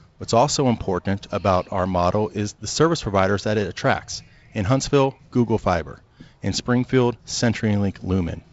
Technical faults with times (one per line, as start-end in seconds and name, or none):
none